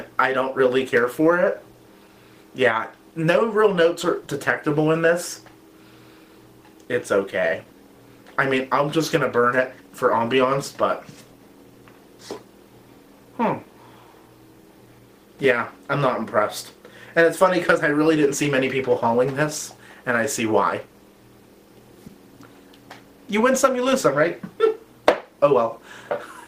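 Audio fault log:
22.07–22.10 s: short concealed packet loss. About 20 ms of audio never arrived in time. The receiver filled the hole by extending the preceding sound, then blended back into the real signal. This leaves a brief smear or wobble where the missing material should be.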